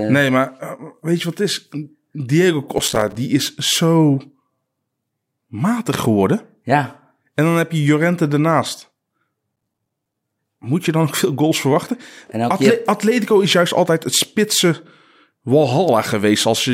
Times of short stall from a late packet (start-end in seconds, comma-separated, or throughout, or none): none